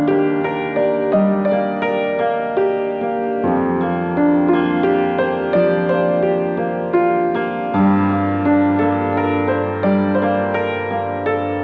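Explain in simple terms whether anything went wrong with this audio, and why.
No faults can be heard.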